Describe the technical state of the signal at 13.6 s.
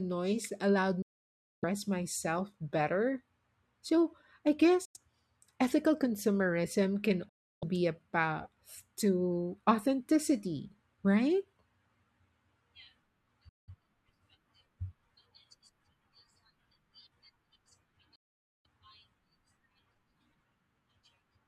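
Bluetooth dropout, 13.49 to 13.69 s: the speech cuts to silence, likely from late, discarded packets, then resumes further along as if it had continued.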